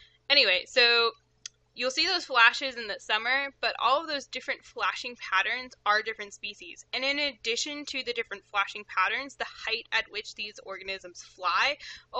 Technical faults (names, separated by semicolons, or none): none